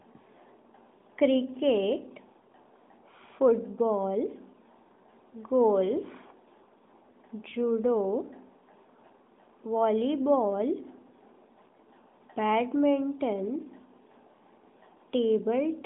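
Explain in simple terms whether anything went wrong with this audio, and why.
Listening closely, nothing in the recording stood out as having gone wrong.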